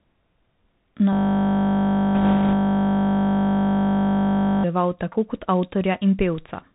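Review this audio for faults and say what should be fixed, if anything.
Bluetooth CVSD headset codec, throughout the clip. The speech is squeezed into a narrow telephone band with nothing above 4 kHz, s sounds come through scratchy, and a granular hiss sits beneath the speech. This fits a 64 kbps CVSD link, where each sample carries only a single up-or-down bit and an adaptive step size cannot track fast, bright detail. To prevent it, switch the headset to a wideband profile such as mSBC, or record through a wired microphone.

System hang loop, from 1.13 s to 4.64 s. A 20 ms slice of audio repeats exactly, roughly 175 times, so the sound becomes a steady buzz at 50 Hz until normal audio resumes with "tako kot". The machine or its audio driver froze while the sound hardware kept cycling through one short stretch of its ring buffer. To prevent it, find and fix the driver or system stall, and have playback mute when the buffer stops being refilled.

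Bit errors on a Bluetooth voice link, from 2.15 s to 2.54 s, inside the looping stretch. A rushing, crackly noise rides over the audio there, without sharp clicks, pointing to an error rate of around 2 percent. Because no CVSD bit outweighs the others and mistakes fade out, flipped bits turn into diffuse noise rather than loud bursts. To prevent it, improve the radio link by shortening the distance, removing interference, or moving to a more robust Bluetooth mode.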